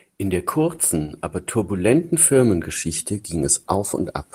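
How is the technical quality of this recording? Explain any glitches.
No technical faults can be heard anywhere in this speech recording.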